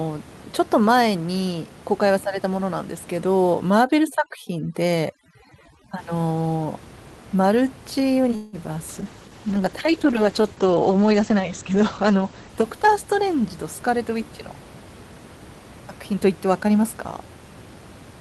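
From 3.70 to 5.98 s, overdone noise removal strips away frequency bands near the noise estimate, leaving a reduced, twinkling background around the speech. The room noise stays about 21 dB below the speech.

At 8.35 to 8.56 s, a 174 ms call audio freeze adds a gap. The last sound is stretched into a fading buzz before the speech resumes with nothing lost. This likely comes from delayed packets draining the jitter buffer.

At 8.93 s, a call bitrate drop cuts the encoder from 48 to 12 kbps and the bandwidth from 20 kHz to 8 kHz. The speech becomes rough and muffled, bottoming out for about 3.3 s, until 14.20 s.

At 9.01 s, a skip ahead discards about 70 ms of queued audio. Playback jumps forward almost seamlessly, with just a 7 ms join.

From 9.48 to 10.65 s, a jitter buffer slow-down repeats pitch periods to rebuild its reserve, adding 57 ms. The speech runs at 96% speed, drawn out but at unchanged pitch.

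Two jitter buffer speed-ups trim pitch periods to reduce excess delay. From 12.86 to 14.20 s, about 100 ms is removed (106% speed), and from 16.13 to 16.84 s, about 50 ms is removed (107% speed). Both sound hurried at the same pitch.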